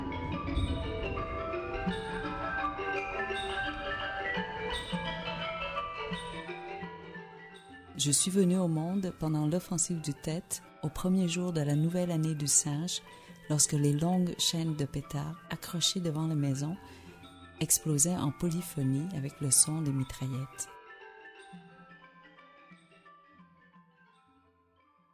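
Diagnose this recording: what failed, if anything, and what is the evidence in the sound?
Nothing failed, and the sound gives no evidence of a fault at any stage.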